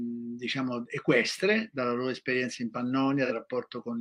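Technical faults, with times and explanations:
3.25–3.32 s, AAC frame loss with concealment: a brief smeared, noisy patch where the decoder rebuilt about 43 ms from the previous spectrum, consistent with one lost frame.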